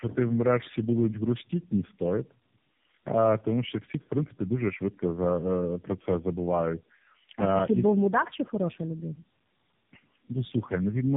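From start to finish the speech carries tandem speech coding, which fits a chain of three low-rate speech codecs such as G.729A twice and then AMR-NB. Each re-encoding stacks roughness and warble on the last, beyond what any single codec would leave, over a band ending near 3.8 kHz.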